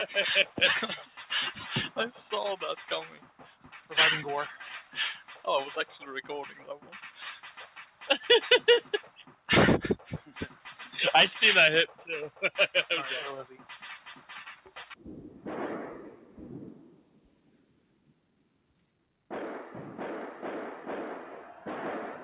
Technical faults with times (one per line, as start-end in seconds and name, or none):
0.00-22.23 noise suppressor applied to music or sounds
0.46-1.31 sound cut by the noise suppressor
2.76-3.91 sound cut by the noise suppressor
4.50-8.06 sound cut by the noise suppressor
8.82-10.88 sound cut by the noise suppressor
11.87-12.42 sound cut by the noise suppressor
13.57-14.96 sound cut by the noise suppressor
16.89-18.98 sound cut by the noise suppressor